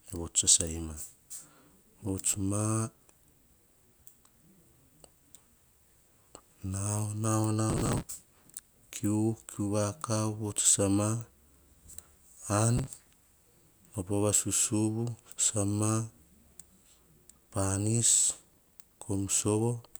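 Processor overload crackle cuts into the speech from 7.70 to 8.61 s, 12.78 to 13.15 s and 18.52 to 19.04 s. Runs of missed buffers, each around 3 ms long, are skipped outright, leaving hard-edged gaps heard as a gritty, tearing crackle over the audio.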